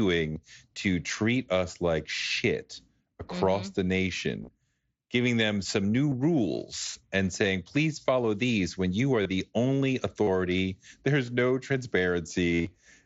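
Concealed Bluetooth headset packet loss: headset voice packets dropped, and the phone filled each gap by repeating recent waveform, leaving brief buzzy, held patches at 0.33 s before "to treat us like", 4.42–4.48 s before "giving them some new", 6.10 s before "rules and saying please", 9.23 s, 10.23 s, 11.26 s, and 12.55–12.71 s. The last is the longest, with runs up to about 50 ms and a slight warble as the sound returns.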